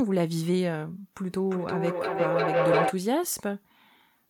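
From 1.27 s to 3.0 s the speech is hit by feedback howl. The sound is going round a loop from microphone to loudspeaker and back, and each trip adds level. So the repeats grow instead of dying away. They narrow to a tone of roughly 500 Hz. One trip round the loop takes about 400 ms. At its peak it sits about 3 dB above the speech.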